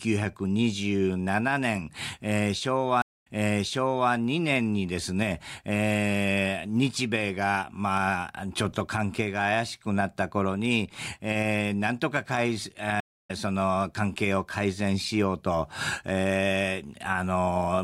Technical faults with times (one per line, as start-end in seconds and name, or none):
3.02-4.12 stream reconnect
13.00-13.31 stream reconnect